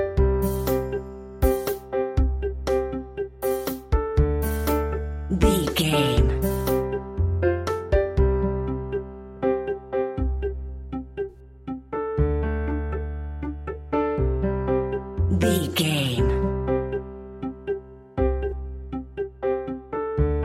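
Corrupt frame concealment shows up twice in this audio, at 11.29 to 11.37 s and at 18.49 to 18.53 s. Flipped bits made AAC frames undecodable, and the decoder papered over them by muting or scrambling. Their lengths fit two damaged frames, then one.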